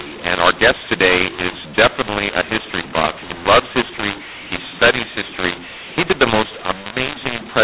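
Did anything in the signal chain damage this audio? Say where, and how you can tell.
Yes: the speech is harsh and distorted throughout, with pauses filled by noise. This is mu-law and A-law mixed up: A-law G.711 samples decoded as mu-law, scrambling levels.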